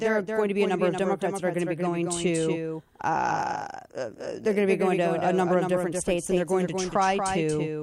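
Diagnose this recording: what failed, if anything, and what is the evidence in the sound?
Every syllable of the speech is followed by a clean, full-band second copy around 200 ms behind and roughly 5 dB quieter, present from start to finish. It has none of the decay or room colour a real echo would have, so it reads as a doubled audio track rather than acoustics. The likely cause is at the driver or routing stage: the same signal is captured a second time through a slower path and mixed back in at a fixed offset.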